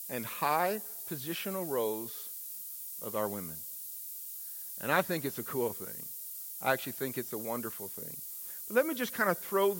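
From start to finish, the speech carries low bit depth with noise shaping: only 6 bits, with rounding error pushed upward in frequency. The result is a steady, thin hiss climbing sharply toward the top of the band, nearly as loud as the speech itself.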